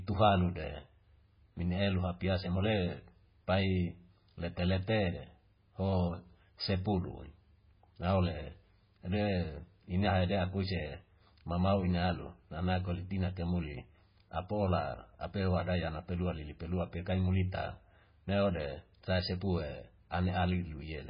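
Throughout, the speech sounds heavily watery and swirly with nothing above 5.1 kHz, likely from MP3 compression starved of bits, fitting a 16 kbps encode.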